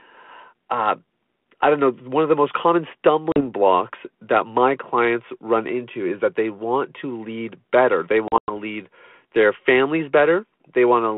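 Speech over a narrowband phone line cuts to hard-edged silence at 3.32 to 3.42 s (40 ms lost) and in scattered gaps from 8.28 to 8.51 s (140 ms lost, longest run 100 ms), each followed by slightly distorted speech. This is packet loss on an ADPCM call: the decoder's predictor and step size lose sync with the sender.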